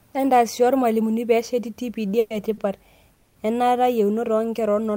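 At 2.19 s the speech hangs for about 110 ms: the last sound is dragged out as a fading buzz, then picks up right where it left off, nothing lost. That's a call audio freeze, likely packets held up and the jitter buffer running dry. At 2.54 s there's a short stall from a late packet: one sound stretched by about 30 ms with a slight dip before carrying on. At 3.14 s another freeze holds for about 220 ms, the same fading buzz, adding that much delay.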